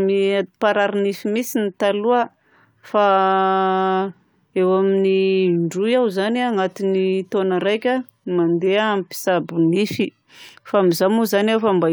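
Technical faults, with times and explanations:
No technical faults are heard in this speech clip.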